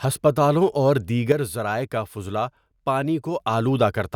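At 1.32 s, right after "ہسپتالوں اور", a sudden gain jump drops speech and background noise together by about 6 dB until 3.4 s. The instant, unramped step, unlike a fade, likely comes from an abrupt setting change.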